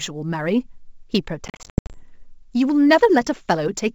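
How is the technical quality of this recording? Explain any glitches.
The recording has two faults: a faint roughness that runs through the whole clip, and a burst of dropouts in the middle of the speech. Both ride on a G.722 wideband telephone stream, whose coding itself leaves little or no damage.

Sample clock jitter is present from start to finish. The converter's clock wanders by roughly a couple of microseconds, so each sample lands a little early or late, and the timing error turns into an amplitude error wherever the waveform is changing quickly. That produces a grainy hiss around 40 dB below the speech. It swells on loud and bright sounds and disappears in the pauses, which separates it from steady background noise or codec hiss.

Packet loss on an ADPCM call occurs between 1.48 and 2.03 s. Over about 460 ms, some 320 ms of audio goes missing in scattered gaps, the longest lasting 80 ms, which points to roughly thirty small packets. 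Each gap is filled with hard-edged silence. Because the decoder's adaptive predictor and step size lose track of the sender's, speech comes back after each hole with brief distortion before settling within tens of milliseconds. That recovery smear is what separates it from a clean mute or an edit.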